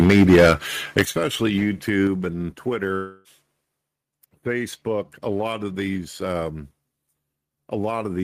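From the first instant to 0.53 s the speech has a harsh, crackling edge on its loudest moments, with a large share of the waveform flattened at the converter's limit. This is likely microphone overload: the input was set about 7 dB too hot, so the converter ran out of headroom and cut the tops off the peaks. At 0.04 s, inside that distorted stretch, the level drops abruptly by about 3 dB. That points to the microphone volume being stepped down, likely the call software reacting to the clipping and lowering the device's input gain in a single move.

The crackle comes back briefly from 0.98 to 1.02 s, again likely microphone overload, with peaks pushed about 6 dB past the converter's limit and a smaller fraction of them squared off. Right after it, at 1.05 s, voice and background fall sharply together by about 10 dB. That is a much larger microphone volume step-down, likely triggered by that fresh overload. 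A further drop of about 4 dB follows at 2.07 s, the same kind of one-step input-gain cut, this time without distortion just before it.

From 2.95 to 3.28 s the speech gives way to a fading, buzzy continuation of the last sound, and then normal audio resumes with a gap in the flow. This is likely a long network dropout: about 300 ms of audio never arrived, and the receiver filled roughly 295 ms of it by extending what it had last played, so that portion of the speech is simply lost.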